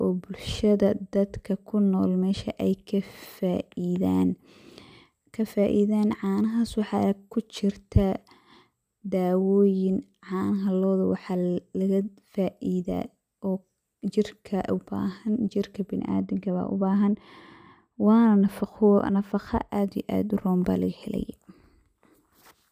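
From about 15.99 s to 19.69 s the speech suddenly goes dull, and that's de-emphasis applied wrongly. A treble cut meant to undo pre-emphasis got applied where there was nothing to undo (or applied on top of an earlier one), so the top end rolls off smoothly, down about 13 dB at 10 kHz relative to 1 kHz. Sibilants and consonant edges lose their bite, and it sounds muffled, like talking through a blanket, until it snaps back.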